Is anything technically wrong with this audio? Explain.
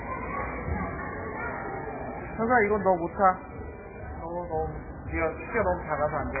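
Yes. Throughout the clip, heavy lossy coding has starved the signal of bits, most likely MP3 compression at a very low rate, around 8 kbps. To fit that budget the encoder has discarded everything above about 2.5 kHz and zeroed the weaker frequency components, which drop in and out from frame to frame. The result is dull, band-limited audio with a watery, swirling texture, metallic chirping where brighter detail should be, and smeared, softened attacks.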